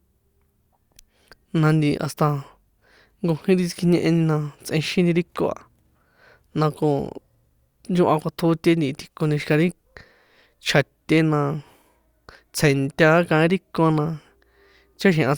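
No technical faults can be heard anywhere in the recording; the signal stays intact and steady throughout.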